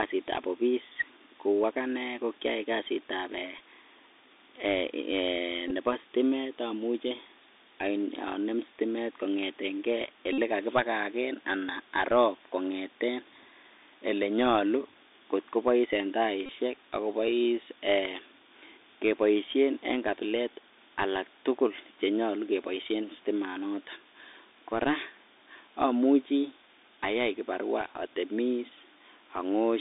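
The whole speech clip runs through a Bluetooth CVSD headset codec. The band stops near 200 Hz and 3.7 kHz, which fits 64 kbps CVSD. The one-bit step tracking is plainly audible. S sounds turn scratchy. A granular hiss sits underneath.

Bluetooth headset packet repeats follow. At 3.59 s comes a brief buzz. From 5.68 to 5.71 s the losses are scattered, the longest run about 15 ms. From 10.33 to 10.38 s and 16.46 to 16.49 s come steady runs. Lost packets were replaced by the last one decoded again. Each repeat lasts 3.75 ms, so runs buzz near 267 Hz.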